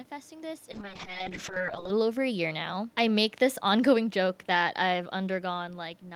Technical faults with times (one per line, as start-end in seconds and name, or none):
0.72-1.97 call bitrate drop
3.65-5.73 automatic gain falling